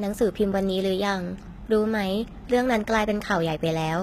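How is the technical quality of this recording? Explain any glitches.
Compression damage is plainly audible throughout. The treble sounds bright but synthetic, with gritty, lispy s sounds and nothing above 14.9 kHz, which points to likely HE-AAC compression at a low bitrate around 20 kbps. The top band is rebuilt from copied lower bands, unlike a plain low-pass, which would sound dull.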